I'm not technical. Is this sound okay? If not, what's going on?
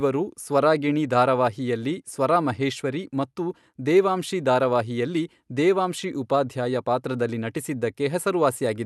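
Yes, nothing here is faulty.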